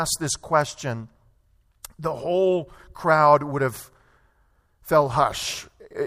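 Nothing in this speech recording stands out as a technical fault, so there's nothing to flag here.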